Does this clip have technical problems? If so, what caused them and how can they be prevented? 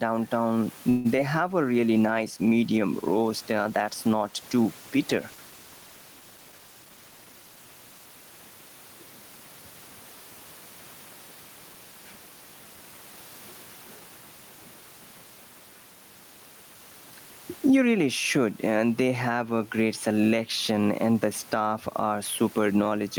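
Yes. Gain pumping runs throughout: the background swells in pauses and ducks under each loud syllable by about 10 dB, likely from input gain set too high feeding a fast limiter. On a waveform the noise floor rises and falls between peaks. Lowering the microphone gain so the limiter rarely engages prevents this.

A call audio freeze at 0.89 to 1.21 s stretches the last sound into a fading buzz for about 150 ms. The likely cause is delayed packets draining the jitter buffer. The spectrogram shows a smeared, static band rather than a gap. A steadier network path or a deeper jitter buffer prevents it.

Short concealed packet loss at 1.17 to 1.20 s leaves a brief smear where about 20 ms was lost and about 8 ms was synthesised from the preceding sound. It shows as a short blurred patch in the spectrogram. Reducing packet loss, or enabling redundancy such as forward error correction, prevents it.

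A call bitrate drop from 1.63 to 8.87 s makes the sound rougher and duller, which fits the encoder falling from about 32 to 18 kbps. The spectrogram loses upper-frequency detail for roughly five and a half seconds. More reliable bandwidth prevents the encoder being throttled.

A jitter buffer speed-up at 6.38 to 7.57 s plays the audio at about 112% speed without a pitch change, trimming roughly 150 ms to cut excess delay. The waveform looks compressed in time. A steadier network path keeps packets from arriving in bursts.

The room noise sits about 34 dB below the speech.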